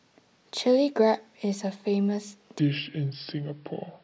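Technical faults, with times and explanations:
2.59–4.04 s wrong sample rate: speech slows to 0.73 speed and drops 5.5 semitones, which fits 22 kHz audio played at 16 kHz; spectrogram harmonics sink and stretch.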